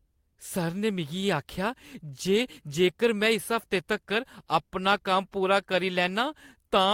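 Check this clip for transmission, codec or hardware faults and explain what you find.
One fault in this speech. At 2.35 s, just before "जेकर में इस हफ्ते", there's a lost packet rebuilt from error correction. The next packet's low-bitrate copy filled roughly 20 ms, so there's no gap, just a briefly rougher, noisier patch.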